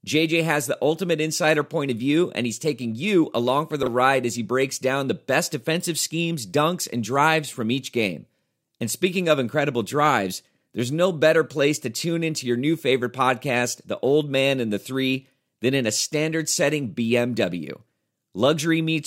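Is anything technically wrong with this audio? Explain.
Yes. Chunks out of order occur at 3.83 to 3.87 s, in the speech. In that span of about 43 ms, one short block of audio, about 10.7 ms long, plays after the blocks that should follow it, landing roughly three blocks late. Nothing is missing, but the sequence is scrambled and there are three abrupt joins. It is heard as a brief jumbled stutter.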